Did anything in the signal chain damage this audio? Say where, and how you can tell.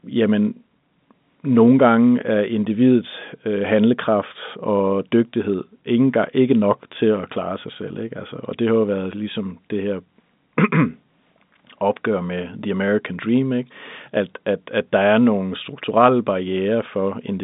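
No, nothing here points to damage; what you hear is ordinary G.711 A-law telephone coding, with the sound held inside the usual line band of roughly 150 Hz to 3.7 kHz and nothing above about 3.8 kHz, exactly as a fixed-line call path would leave it.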